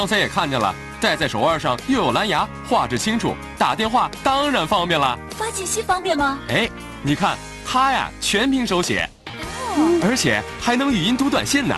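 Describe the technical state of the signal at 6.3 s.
At 6.3 s the signal is intact, with no fault, and the call path carries it as expected, with its top end limited to about 12 kHz.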